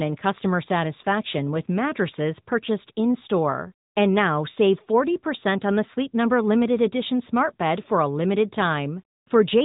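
From start to finish the speech has passed through an AMR narrowband mobile codec, which samples at 8 kHz and rebuilds the voice from a vocal-tract model fed by sparse pulses. Nothing above about 3.8 kHz survives, and plainly audible buzzy, synthetic colouring fits a mid-range mode near 10 kbps.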